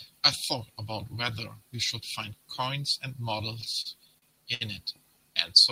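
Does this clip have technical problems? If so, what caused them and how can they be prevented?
Yes: repeated stalls (stutter) from 3.61 to 4.63 s, six brief gaps up to 66 ms, where late packets drained the jitter buffer and the last sound was stretched to cover. A larger or adaptive jitter buffer would prevent it.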